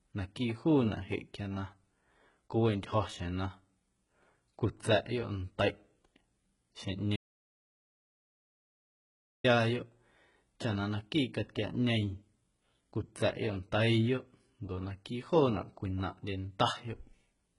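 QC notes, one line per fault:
Throughout: HE-AAC compression. Sibilants sound gritty and metallic, and nothing remains above 11.1 kHz. This is likely heavy low-bitrate HE-AAC coding, around 12 kbps, where the treble is rebuilt from copied lower bands, so its harmonics misalign with the true spectrum.
7.16–9.44 s: audio dropout to silence. The speech cuts off abruptly, leaving about 2.28 s of silence with no room tone, then resumes mid-flow. The likely cause is a lost input while recording continued writing silence, so that stretch of speech is gone.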